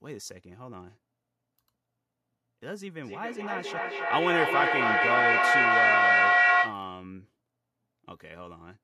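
From 3.03 to 6.85 s, feedback echo between two devices repeats speech about every 0.3 s, swelling about 8 dB above it instead of fading.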